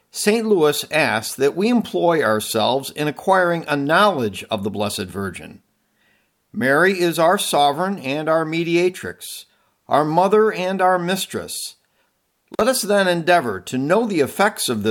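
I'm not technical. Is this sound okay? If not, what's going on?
No. At about 12.53 to 12.61 s, just before "us then endeavor to", an intermittent contact briefly opens the line, cutting the speech for roughly 40 ms with a crackle.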